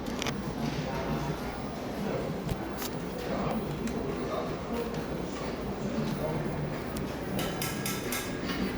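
The likely cause is a recorder or processor handling this everyday-sound recording in 1.0-second chunks and dropping a sliver of audio at some changeovers between them: audio missing between chunks. Each gap is only around ten milliseconds, and the two sides are butted together with no silence, so the sound jumps forward abruptly in tiny skips at 1.54 s, 3.51 s and 6.48 s.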